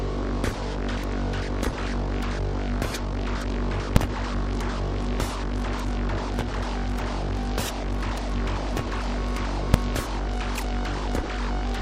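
At 3.96 s and again at 9.74 s the audio jumps to one extreme value, far beyond the audio's peaks, for about 2.7 ms, which fits a 128-sample processing block. These are invalid numbers at full scale: a calculation yielded infinite or invalid values that were pinned to maximum level, and each short block is heard as a single sharp bang.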